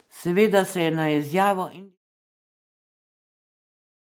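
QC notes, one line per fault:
No faults are heard in this speech clip. The level eases down in a smooth fade out from about 1 s to 1.98 s, with no click or hard edge.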